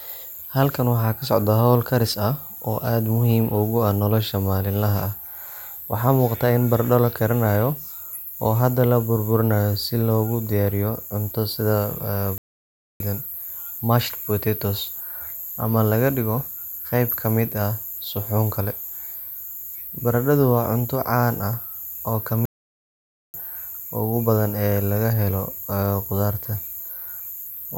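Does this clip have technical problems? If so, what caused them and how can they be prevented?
Yes. The speech has two playback stalls. It cuts to silence from 12.38 to 13.00 s, about 0.62 s, and again from 22.45 to 23.34 s, about 0.89 s. The likely cause is the player running dry or its thread being blocked. Larger buffering and higher audio-thread priority prevent this.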